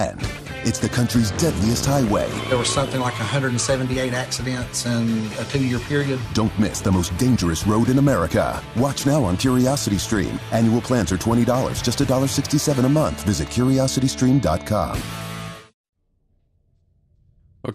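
From start to finish there's plainly audible damage that sounds like MP2 compression, likely from a low-bitrate MPEG Layer II encode, around 80 kbps going by the sound. The top end is dull, with upper bands flickering in and out, and what remains has that gurgling, grainy quality.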